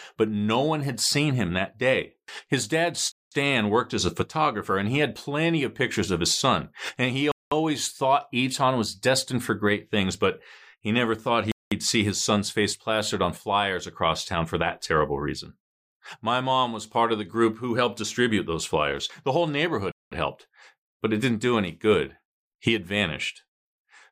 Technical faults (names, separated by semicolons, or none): gap between chunks